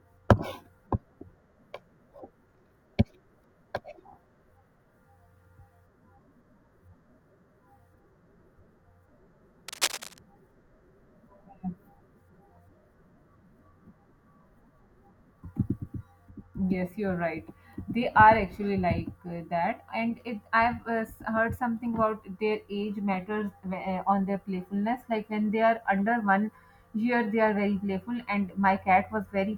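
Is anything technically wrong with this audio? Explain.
Yes. From 9.68 to 10.20 s, cable scratch noise sits over the speech as dense, uneven rustling, only slightly quieter than the speech. A worn lead or connector being moved likely caused it, its contact resistance fluttering. Unlike regular clicks, these bursts are erratic and packed together.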